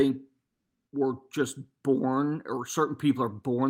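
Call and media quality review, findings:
Comfort noise in place of the background, 0.47–0.91 s (440 ms) before "were just born or". The real background is replaced by steady, featureless noise with about a 5 dB level step. Likely Opus DTX at the sender, with receiver-side noise synthesis.

Distinguishing note: this is not a dropout or a muted gap. The pause keeps a noise floor, but it is smooth and textureless. The background itself is very quiet, about 64 dB below the loud parts, so the swap shows as a change in texture and level.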